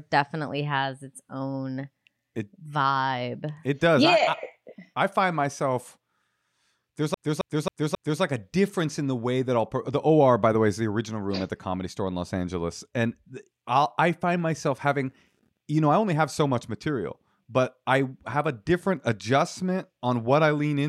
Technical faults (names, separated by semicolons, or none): CD stuck on one turn